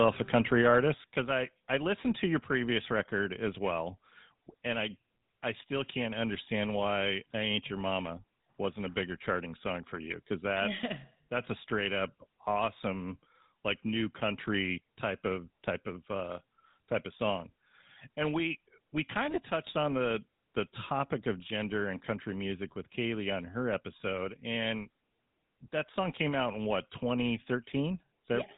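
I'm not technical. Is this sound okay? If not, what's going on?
No, there are a few problems. The biggest runs the whole way through: the speech has gone through the old GSM full-rate codec, the compression early mobile phones used. It throws away everything above 3.8 kHz and rebuilds the voice from a rough model, so it sounds buzzy, gravelly and muffled, like a dated phone call.

Right at the start, from 0.00 to 0.75 s, the loudest moments crackle harshly. The tops of those peaks are being sliced off. That's most likely microphone overload: the mic input was set too hot, so a small fraction of the sound hit the ceiling and distorted.

Then at 1.02 s everything, voice and background together, suddenly drops in volume in one step. That sudden dip is likely the microphone volume stepped down: the calling software noticed the distortion just before and turned the mic input down to stop it.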